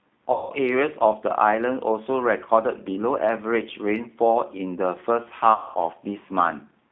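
Throughout, the speech sounds thin, slightly rough and synthetic, confined to roughly 250 Hz to 3.5 kHz. This is the G.729 codec, which fits an 8 kbit/s stream: it rebuilds speech from a vocal-tract filter, a pitch predictor and a few pulses per frame, so the damage is plainly audible.

From 0.32 to 0.53 s, and again from 5.54 to 5.76 s, the voice smears into a fading buzzy tone or coloured noise before recovering, weak or distorted at first. This is VoIP packet loss concealed by the speech codec. About 180 ms and then 210 ms of audio went missing, which fits several lost packets each time. The decoder stretched its last pitch and filter with falling gain.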